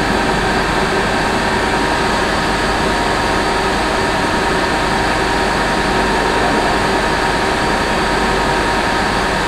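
No dropouts, clicks, distortion or other transport or processing faults are audible anywhere in the recording.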